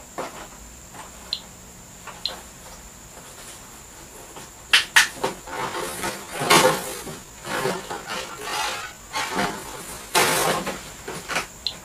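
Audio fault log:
5.32–10.52 s, time-stretched section: the pace drops abruptly to about 0.63 times normal speed for roughly 5.2 s while the pitch stays the same, so this stretch of the audio drags against what comes before it. The likely cause is software lengthening the passage to fit a target duration, holding pitch by repeating short pieces of the signal rather than slowing playback. Normal pace resumes at 10.52 s.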